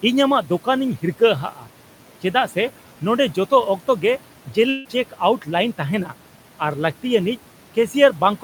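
Across the whole clip the background noise, sitting about 19 dB below the speech, sinks in the gaps and swells back under each phrase. These are noise suppressor artifacts: the suppressor pulls steady-noise bands down by about 12 dB frame by frame, so the floor pumps with the speech.

From 1.51 to 1.67 s the speech briefly goes faint and swallowed, dipping by up to about 9 dB over roughly 150 ms. This is speech cut by the noise suppressor, which mistook that quiet stretch of speech for background and turned it down along with the noise.

From 4.69 to 4.87 s the sound smears into a short buzzy continuation that fades, then the speech resumes with a piece missing. The likely cause is a long network dropout: about 160 ms of audio never arrived, and the receiver filled roughly 153 ms by extending the last sound. No fully silent gap opens.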